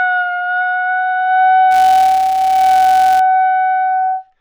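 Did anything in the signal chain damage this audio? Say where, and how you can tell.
Yes. A filter restarted on every block from 1.71 to 3.20 s: each processing block starts from zeroed filter state, leaving a small transient. The result is a level-following buzz at 172 Hz, which fits 256-sample blocks at 44.1 kHz in the buffer stage.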